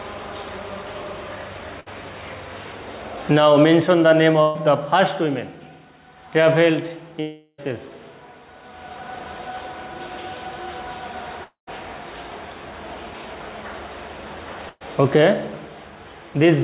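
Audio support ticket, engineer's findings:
Burst of packet loss, 1.80 s, 4.42 s, 14.69 s: last sound smeared into a held buzz or hiss that fades over about 60, 125 and 115 ms, then resumes ahead, skipping about 60, 120 and 120 ms. Jitter buffer concealment over consecutive lost packets.

Long network dropout, 7.21–7.60 s and 11.44–11.69 s: concealment tail runs about 374 ms and 230 ms, decaying into brief silence, and the sound returns with about 380 ms and 240 ms gone. Likely a network stall, not the endpoint. Band-limiting at 4 kHz fits a G.711 A-law call path.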